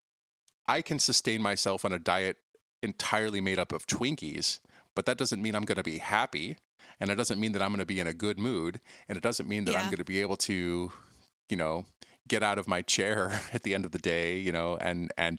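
Speech recording, no technical faults detected.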